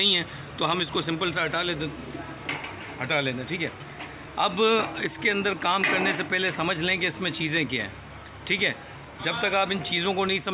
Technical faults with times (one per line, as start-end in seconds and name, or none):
none